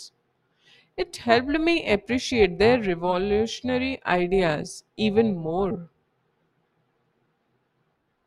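Throughout the speech there is overlap-add ripple: frames were rejoined with an overlap that doesn't sum evenly, so the level dips about 6 dB roughly 300 times a second. It sounds like a metallic buzz with extra tones around the voice. The waveform envelope shows regular scallops, and the spectrogram shows fine vertical striping.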